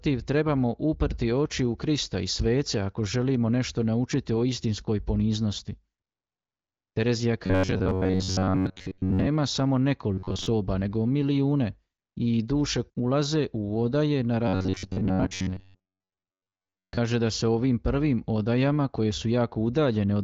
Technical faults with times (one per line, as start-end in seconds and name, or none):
7.46-9.28 robotic sound from repeated short buffers
10.13-10.46 robotic sound from repeated short buffers
14.48-16.98 robotic sound from repeated short buffers